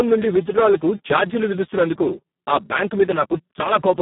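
From start to end, the speech carries heavy Speex codec damage: too few bits for the excitation leave it hoarse, noisy and robotic, a sound that points to a bitrate near 4 kbps. A spectrogram shows blurred harmonics, energy confined to roughly 150 Hz to 3.5 kHz, and nothing above 3.8 kHz.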